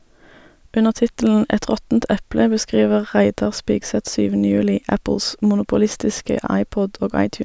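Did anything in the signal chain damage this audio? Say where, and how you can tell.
No, nothing in this speech recording stood out on listening as damage from any stage of the signal chain.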